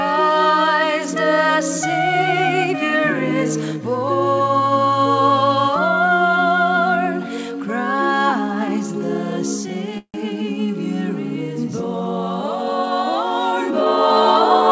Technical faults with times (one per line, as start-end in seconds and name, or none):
9.98-10.16 call audio freeze